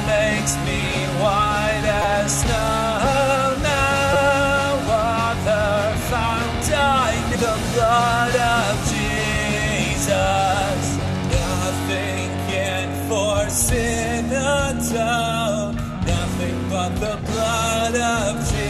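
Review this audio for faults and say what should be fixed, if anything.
Repeated buffer at 2.02–2.04 s and 4.13–4.16 s, where one 5.8 ms block plays four extra times as a brief buzz, and at 9.35 s and 12.52 s, where a single repeat sounds as a click. New audio arrived late, so the device replayed its last block, which fits a 256-sample buffer. To prevent it, enlarge the output buffer or raise the audio thread's scheduling priority so blocks are delivered on time.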